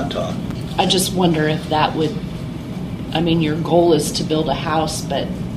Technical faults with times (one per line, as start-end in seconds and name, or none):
0.51-0.53 loud pop